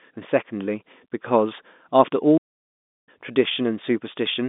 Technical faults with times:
2.37-3.08 playback stall

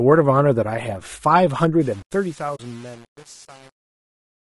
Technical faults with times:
0.00-4.51 low-delay AAC compression
1.81-4.51 truncation distortion on a fade
2.55-2.60 AAC frame loss with muting

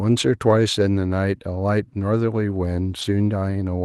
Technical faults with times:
3.01-3.03 lost packet rebuilt from error correction

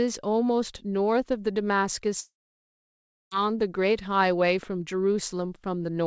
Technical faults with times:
2.20-3.33 long network dropout

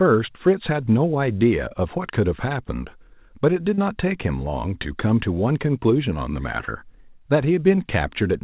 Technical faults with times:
3.74-3.79 short concealed packet loss
6.65-6.69 short concealed packet loss
7.75-7.79 short concealed packet loss

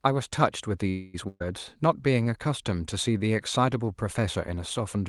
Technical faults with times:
0.89-1.16 call audio freeze
1.28-1.42 burst of packet loss

